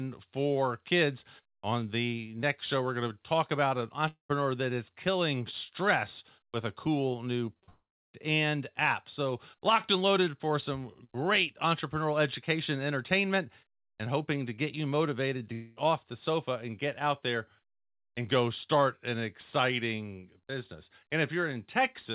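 At 4.08 to 4.31 s the speech cuts out in a long network dropout, likely a run of packets that never arrived. The receiver stretches the last sound into a fading buzz for about a tenth of a second, then leaves roughly 110 ms of silence before speech resumes with that stretch missing. A long dropout differs from brief concealment because the filler audibly gives out and leaves a gap.

Just after "with a cool new", three short concealed packet losses follow in quick succession at 7.53, 7.60 and 7.64 s. They last about 20, 20 and 40 ms, and each hole is patched by continuing the preceding sound before blending back. Because they are so short, they come across as a quick smear or wobble rather than a break. They lead straight into a second long network dropout from 7.70 to 8.15 s, likely packet loss again. Here the fill fades within about 130 ms and roughly 310 ms of silence follows, so the audio picks up again at "and app" with nearly half a second gone.

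A third long network dropout runs from 15.53 to 15.78 s, between "get you motivated to" and "off the sofa and", likely from the same cause. This time the fading continuation covers about 230 ms without reaching silence, so it is heard as a drawn-out buzz in place of the lost audio. Throughout, the telephone-band call codec leaves nothing above 4 kHz.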